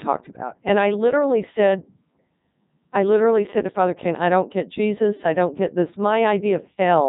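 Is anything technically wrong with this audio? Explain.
Yes, the whole clip has been through a Codec 2 vocoder, and it's heavy damage. The codec doesn't keep the waveform; it sends pitch, voicing, energy and a rough spectral envelope, then rebuilds the speech from sine waves. That's why it sounds robotic and buzzy from start to finish. Nothing comes through above about 3.8 kHz, and the quality points to Codec 2's top 3.2 kbit/s mode.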